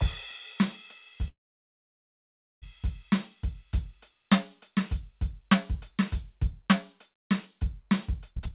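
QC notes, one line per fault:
1.28–2.64 s, call audio freeze: the music stops moving forward and the last instant carries on briefly as a fading buzz, then drops to silence for about 1.27 s of the 1.34 s gap. This is likely a stall where delayed packets left the jitter buffer empty, so the receiver stretched what it had, then waited. When playback resumes it continues exactly where it halted, so nothing is lost, but the whole gap adds 1.34 s of extra delay.
8.31–8.53 s, jitter buffer speed-up: over this final stretch the music rushes at 176% speed while staying at the same pitch, and the steady tempo breaks into a hurried skip. The receiver was holding more buffered audio than it wanted, so it cut short pitch-period-length slices in quick succession, dropping around 150 ms to catch up. The G.711 call path carries nothing above 4 kHz.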